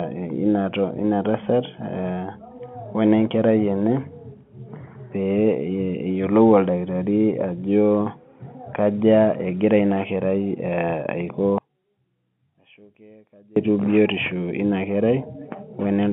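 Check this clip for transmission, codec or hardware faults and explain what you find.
One fault stands out, from 11.58 s to 13.56 s, and the likely cause is one channel inverted: one side of a stereo pair flipped in polarity before the signal was folded down to mono. The shared centre content then cancels against its inverted twin, so the speech drops by about 30 dB and only a faint residue survives until the level returns. Throughout, the G.711 telephone coding keeps the sound within the narrow 150 Hz to 3.4 kHz line band.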